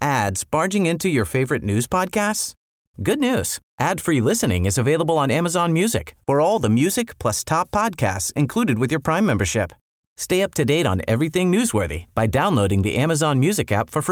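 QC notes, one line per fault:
No faults turned up on listening to this speech recording.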